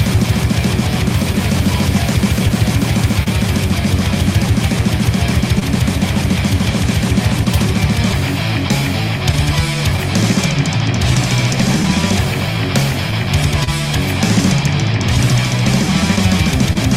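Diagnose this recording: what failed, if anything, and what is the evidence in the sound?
Clock drift between sender and receiver runs through the whole recording. The failure sits at the network receive stage, in the buffer that bridges two clocks. The sender's clock runs slow, by roughly 1.5 percent against the receiver. Audio therefore arrives a little too slowly to keep the buffer level. The evidence is a faint, uneven unsteadiness in timing that never settles.

Repeated timing corrections span from 0.16 s to 15.35 s. The receiver keeps inserting small stretches of audio so its buffer does not run dry. All the edits push the same way, adding time. Together they add about 50 ms over that span. The spacing is irregular. Each correction is tiny, so it comes across as a slight hiccup or a wobble in tempo rather than a clear break.

Scattered short gaps appear in two stretches. Between 1.32 s and 3.28 s there are a few, filling about 50 ms in total. 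Between 7.44 s and 13.69 s there are about ten, filling about 150 ms. None is longer than about 30 ms. This is network packet loss or lateness. The receiver concealed each hole by extending the preceding sound. Nothing is lost outright, but brief ticks and smears are audible.

A short stall from a late packet occurs at 5.59 to 5.63 s, and another at 16.73 to 16.77 s. In each case a packet missed its playout time and the jitter buffer emptied. The receiver held the last sound for 21 ms, then 25 ms, until data arrived. Playback then resumed from the same point. The result is a sound held slightly too long, with a faint buzz or dip.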